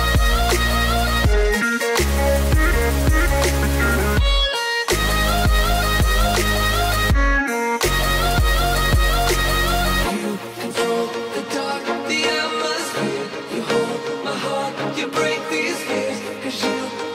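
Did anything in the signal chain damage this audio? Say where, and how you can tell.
No, nothing along the way seems to have harmed this one, as there's no point anywhere in the audio where the signal chain leaves a mark you can hear.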